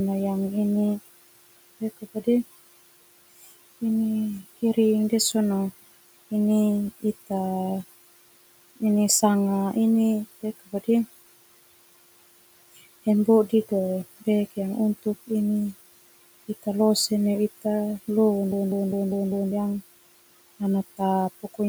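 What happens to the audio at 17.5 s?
At 17.5 s you're hearing the noise suppressor artifacts that run through the whole clip. The suppressor keeps estimating which frequency bands hold steady background noise and turns those down frame by frame, by about 18 dB. So the room noise, which sits about 17 dB below the speech, drops away in the gaps between words and comes back up underneath them. That gives the background a pumping, gated feel rather than a steady bed.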